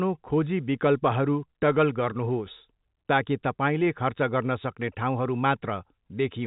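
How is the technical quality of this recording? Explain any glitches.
No glitches or faults heard.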